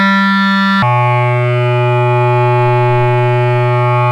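At 0.82 s the music drops into a section at the wrong speed and stays there to the end, running at 0.625 times its proper rate. Pitch and tempo fall together, roughly seven semitones lower, so everything turns deep and sluggish, likely because this stretch was played back against a mismatched clock. On a spectrogram the harmonic lines step down and crowd closer together at that moment. In the waveform, attacks and note envelopes look stretched out in time.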